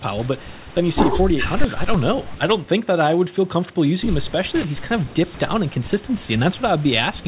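No technical fault can be heard in this speech recording, which carries the narrowband sound of a call path with nothing above 4 kHz, consistent with a G.711 mu-law telephone codec.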